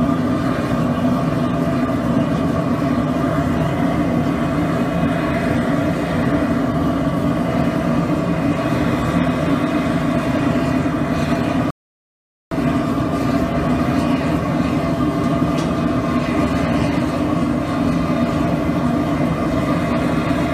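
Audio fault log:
11.71–12.52 s, rebuffering stall: playback halts into silence for about 0.81 s while the player waits for more data, then picks up at exactly the point it stopped. Unlike a dropout, nothing is skipped; the gap simply adds time.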